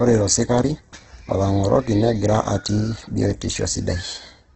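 Throughout, the speech sounds grainy and rough, with nothing above 8.4 kHz and little of MP3's swirl: likely heavy Opus compression at roughly 12 kbps.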